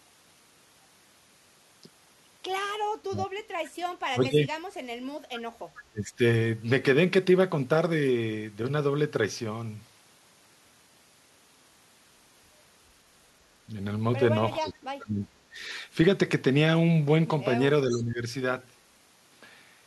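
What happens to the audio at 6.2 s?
At 6.2 s the speech is near the end of a short suppression that runs from 5.9 to 6.22 s. The level falls sharply, at its deepest by around 25 dB, for about a third of a second. This is speech suppressed in double talk, likely from an echo canceller that heard both sides at once and turned the near talker down with the echo. Unlike a packet dropout, the speech is attenuated rather than replaced by silence.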